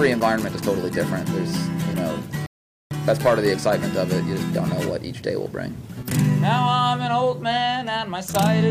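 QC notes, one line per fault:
2.46–2.91 s, rebuffering stall: playback halts into silence for about 0.45 s while the player waits for more downloaded audio, then picks up exactly where it stopped. Unlike a dropout, no material is skipped; the gap only adds time.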